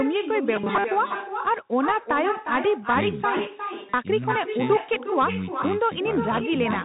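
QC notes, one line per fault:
throughout: echo with no canceller. Every phrase is shadowed by a thinner copy about 8 dB down and roughly 400 ms late, as the far end's loudspeaker feeds its microphone unremoved.
throughout: Bluetooth CVSD headset codec. The sound is dull, with nothing above 3.8 kHz, scratchy sibilants and granular hiss underneath, which fits a 64 kbps one-bit CVSD headset link whose step size can't keep up.
0.56–0.87 s, 3.37–3.94 s: robotic sound from repeated short buffers. The speech turns into a rigid metallic buzz at 200 Hz, likely from 5 ms chunks being looped while most of the real audio is skipped.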